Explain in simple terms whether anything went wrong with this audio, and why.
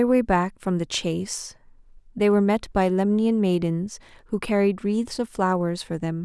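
Nothing went wrong here: the speech comes through intact, with no faults to point to anywhere in the recording.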